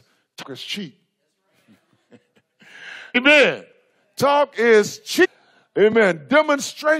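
Damaged data in a compressed stream hits three times: at 0.41 to 0.44 s, just before "is cheap", at 3.14 s, and at 5.24 to 5.26 s. Corrupted bytes make the decoder misread frames and lose sync, so each spot becomes a brief chirp or blip.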